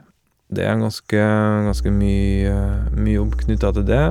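At 1.69 s a mains hum enters and holds to the end, a steady 60 Hz drone with low harmonics, roughly as loud as the speech itself. A ground loop or nearby transformer is feeding power-line current into the signal. On a spectrogram it shows as a bright, unbroken horizontal line at 60 Hz with fainter lines stacked above it.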